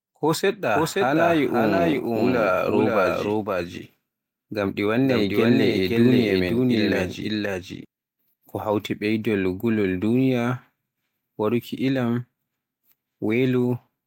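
From 0.75 s to 7.85 s a doubled audio track runs under the speech: a second full-band copy about as loud trails by about half a second, likely a slower capture path recording it again. Unlike an echo, it never decays, carries no room colour, and switches on and off abruptly.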